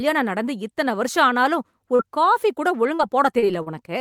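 Short concealed packet loss at 1.95–2.02, 2.95–3.02, 3.39–3.45 and 3.62–3.69 s: each time about 40 ms of speech went missing, and the receiver extrapolated the preceding sound for roughly 35–39 ms before blending back. This leaves a brief smear rather than the hard silence or click of an unconcealed dropout.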